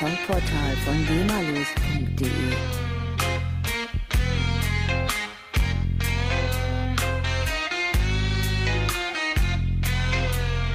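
For the first 2.0 s the audio is dull and smeary, with the treble missing and obvious codec artefacts, then it jumps cleanly to fuller quality with no gap. That's an adaptive stream starting at a low bitrate, sounding like roughly 16 kbit/s Opus stepping up to about 64 kbit/s.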